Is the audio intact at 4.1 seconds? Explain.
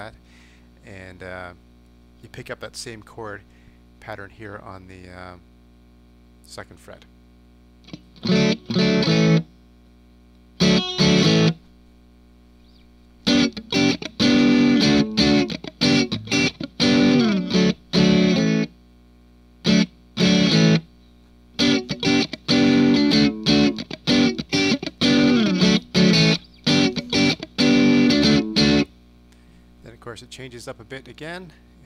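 Yes, at 4.1 seconds the audio is intact, with no dropout, click, distortion or other fault.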